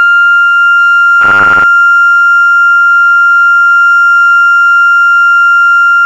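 A music recording in which, from 1.21 to 1.64 s, new audio likely arrived too seldom and the playback filled the gaps by looping a 10 ms slice, about half the time, producing robotic sound from repeated short buffers: a rigid, metallic 100 Hz buzz that follows the original only roughly.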